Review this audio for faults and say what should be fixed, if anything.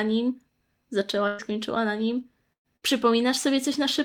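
Bursts of packet loss: several packets in a row were lost or arrived too late at 1.27 to 1.42 s (just before "na nim"), 2.53 to 2.67 s and 2.76 to 2.85 s (both after "na nim"). The receiver held the last sound and faded it, going nearly silent in the second gap. About 120, 120 and 60 ms of speech were then skipped.

Forward error correction and a deeper jitter buffer would help prevent these gaps.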